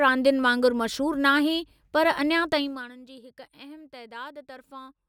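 From 2.52 to 2.94 s the gain drops by about 20 dB in unsmoothed 1 dB steps, roughly fifty per second, producing zipper noise: each jump adds a tiny click, so the speech fades under a rapid ticking, zipping texture until the level settles.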